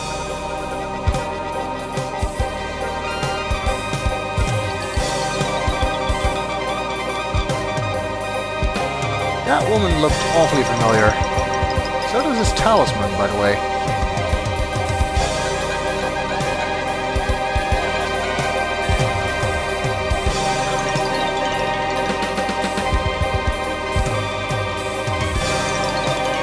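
Nothing is technically wrong with this clip.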